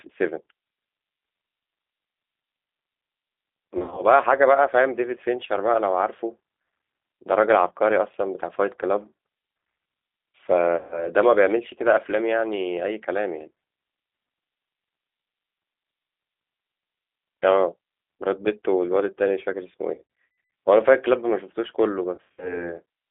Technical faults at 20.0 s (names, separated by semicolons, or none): G.729 codec; VoIP packet loss concealed by the speech codec